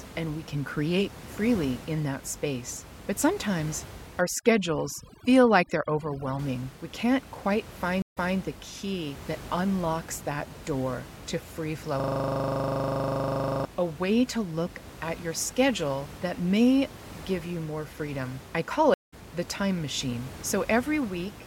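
Speech, with room noise sitting about 17 dB below the voice, carries three kinds of fault. From 4.21 to 6.39 s, overdone noise removal strips the background to near silence flecked with twinkling specks, and the voice's quieter bands are pulled down with the noise. On a spectrogram this looks like a blotchy, moth-eaten pattern of isolated bins switching on and off. A stream reconnect at 8.02 s leaves 146 ms of silence, after which the player restarts its decoder and replays audio from 213 ms earlier, so a fragment is heard twice. A second reconnect at 18.94 s brings 184 ms of silence, and the audio picks up roughly 150 ms further on, skipping a short stretch. Both show on the waveform as a flat gap with a soft or muted onset. From 12.00 to 13.65 s, a system hang loop repeats one 40 ms slice some forty times while the sound hardware keeps cycling its buffer, producing a steady 25 Hz buzz. 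It appears as an identical block stamped out at exact 40 ms intervals, with evenly spaced vertical stripes on a spectrogram.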